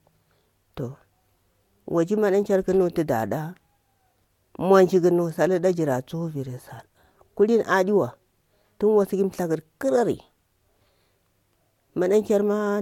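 No technical faults can be heard anywhere in this speech recording. Nothing stands out at any point that would call for a timestamp or a closer listen.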